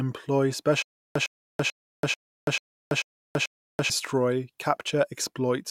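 Speech clip with stutter and silent gaps from 0.82 to 3.90 s. A 106 ms burst repeats seven times, every 439 ms, with 334 ms of silence between. A stalled stream likely replayed its last fragment.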